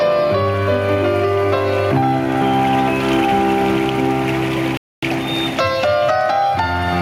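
The whole recording pumps, with the gain swinging by around 20 dB, which is gain pumping, likely from gain set far too high with a fast limiter clamping down. Then from 4.77 to 5.03 s the audio drops to a quarter-second of silence and resumes, a Bluetooth stall where the headphones' buffer likely ran dry waiting on resent packets.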